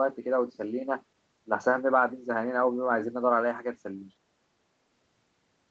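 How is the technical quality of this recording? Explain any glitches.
No glitches turn up anywhere in this speech recording, which sounds like it came through an ordinary call line with nothing above about 8 kHz, typical of a wideband call codec.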